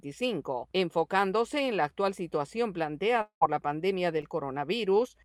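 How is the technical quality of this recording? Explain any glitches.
Two network glitches are audible in the recording. The first is a gap of about a fifth of a second, and the second is a much briefer smear about a second later.

Long network dropout, 3.21 to 3.43 s: the sound is held over as a fading buzz that goes to silence for about 100 ms before the audio resumes further along. The likely cause is that roughly 200 ms of the stream never arrived. The receiver extended the last sound to cover the hole and then ran out of material to extend. The lost section is simply gone, and playback picks up after it.

Short concealed packet loss, 4.21 to 4.25 s: about 20 ms of audio failed to reach the decoder in time. The receiver synthesised a replacement by continuing the preceding signal, pitched if it was tonal and noise-shaped if not, then crossfaded back into the real stream. The result is a brief wobble or smear. 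Any very short transient in that window could be lost within the patch.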